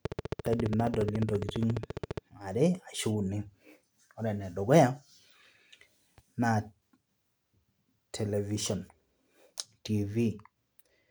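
From 0.05 s to 2.19 s a steady ticking rides over the speech, about thirty sharp pops at a regular 14.6 per second, standing well above the voice. This train of clicks likely comes from electrical interference or a faulty connection or power supply injecting pulses of much the same shape.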